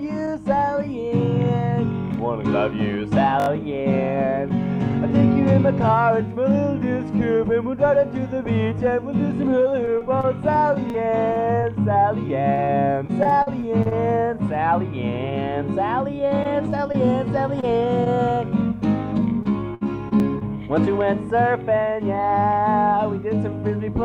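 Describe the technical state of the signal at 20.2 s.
At 20.2 s two faults overlap. The stream is inside a stretch of repeated packet loss (robotic sound) running from 19.43 to 20.43 s. Four separate holes open in the incoming audio, the longest about 63 ms and about 120 ms in total. The receiver covers each one by extending the last sound it had, so about 12% of that second is patched-in continuation. The result is choppy audio with pieces missing.

Right at 20.20 to 20.22 s there is also a repeated buffer. New audio did not reach the output in time, so the device played its previous 20 ms block a second time instead of falling silent. No audio is lost. The same tiny fragment is simply heard twice, joined by a hard edge. At that short length it comes across as a brief click or buzz rather than an obvious stutter.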